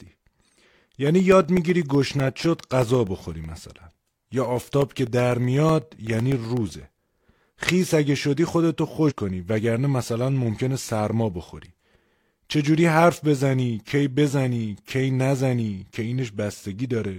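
Periodic USB or driver dropouts run from 0.07 s to 7.57 s of this speech clip. Every 0.125 s, eight times a second, about a millisecond of audio is lost and replaced by silence, around seventy times in all. The evenly spaced gaps come from something stalling the USB bus or audio driver on a fixed schedule. They sound like a steady ticking that appears only while the talker's signal is present and falls away in pauses. Compressed frames skipped at 9.06 to 9.13 s produce a short forward jump. Roughly two whole frames were never played, either absent from the stream or rejected by the decoder as corrupt, so about a tenth of a second of speech vanishes. The jump fits frames of 46.4 ms.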